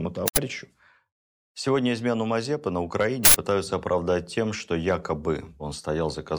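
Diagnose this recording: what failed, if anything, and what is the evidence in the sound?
Two loud bursts of digital noise, at 0.28 to 0.37 s and 3.25 to 3.34 s before "оправдать тем что": an uninitialised buffer in the driver played leftover memory, each 93 ms burst fitting a 4096-sample block.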